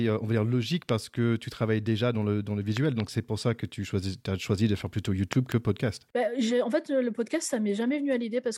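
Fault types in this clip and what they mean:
Loud pop: a sharp transient laid over the speech, which continues underneath. There is one pop after "on logique" and double pops after "travailles déjà dans le" and "choisi de faire plutôt", peaking roughly 15 to 20 dB above the speech, likely from switch or connector discharges.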